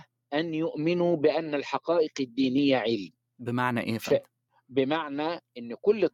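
No technical faults can be heard anywhere in this audio.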